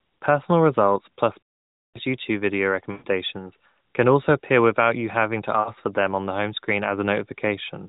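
Right after "results plus", at 1.44 s, there's a run of lost AMR speech frames lasting about half a second to 1.99 s. The decoder keeps repeating the last good pitch and vocal tract settings at falling gain, so the sound smears out and dies to silence. Shorter gaps follow at 2.92–3.05 s and at 5.60 s, just after "without you having to" and before "for them on the", where a 60 ms drop leaves the sound briefly drawn out and fading. All of it sits on band-limited AMR narrowband audio at 12.2 kbps, with nothing above 4 kHz, which fits its 8 kHz sampling.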